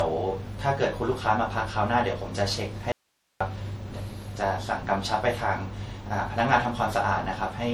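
From the start the whole clip has a swirly, hollow, smeared quality, and consonant attacks lose their edge. That's generation loss, most likely from a few rounds of MP3 re-encoding at around 64 kbit/s. Each pass quantises on a shifted frame grid, so the noise and spectral holes stack up.

At 2.92 s the speech cuts out abruptly and comes back at 3.41 s. That's a dropout to a faint residue lasting about half a second. Only hiss fills the gap, roughly 45 dB below the speech. The path after the break likely stayed live while the signal feeding it disappeared.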